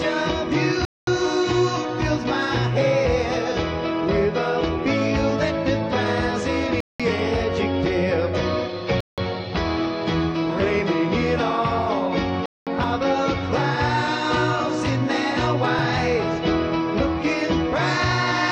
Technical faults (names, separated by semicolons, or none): Bluetooth stall